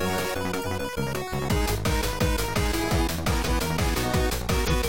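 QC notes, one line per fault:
0.61–0.66 s, 3.44–3.49 s, 4.65–4.73 s, compressed frames skipped: whole frames of the compressed stream never reached playback, either missing from the file or discarded by the decoder as corrupt, so the audio leaps forward by about a tenth of a second at the first point and about a fifth at the other two.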